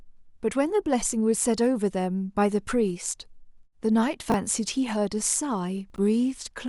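At 4.3 s the speech jumbles briefly. These are chunks out of order, where a 20 ms chunk lands one slot late and swaps with its neighbour. Again from 5.9 to 5.98 s a chunk arrives three chunks late, leaving hard joins and a scrambled blip.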